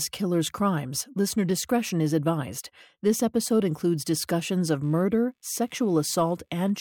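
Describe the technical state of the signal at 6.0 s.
Computer activity noise is present at 6.0 s. It starts at 4.83 s, after "episode includes discussions of", and runs to the end. Processor load shifts the shared audio ground. This adds a faint buzz pulsing around 70 times a second, about 40 dB below the speech.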